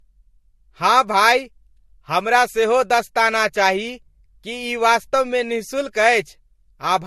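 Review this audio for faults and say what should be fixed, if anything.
Throughout the speech, two different kinds of compression artefact are heard together, and nothing sounds above 13.2 kHz. The cause is likely transcoding between lossy codecs. The sound fits a low-rate Vorbis encode, around 44 kbit/s, later re-encoded as MP3 near 63 kbit/s. The MP3 stage spends its bits re-coding the Vorbis damage and adds its own. The lowest band limit in the chain stays. Keep a lossless master and encode to the final format only once.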